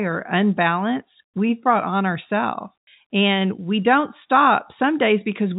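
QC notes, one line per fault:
No faults found in this speech clip. The G.711 telephone coding sounds as it should, with nothing above about 3.8 kHz and at most a faint grain from the 8-bit logarithmic steps, which fits 64 kbps mu-law.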